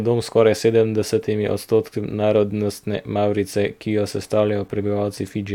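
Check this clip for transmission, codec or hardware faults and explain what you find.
Nothing stood out on listening to this speech clip.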